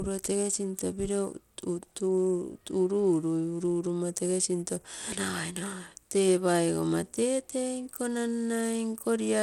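A speech recording carries plainly audible coding damage from start to finish, most likely Bluetooth SBC compression at a starved bit pool, consistent with roughly 96 kbps. Unlike a fixed low-pass, content reaches 21.1 kHz, yet treble flickers and gritty aliased noise rides the speech.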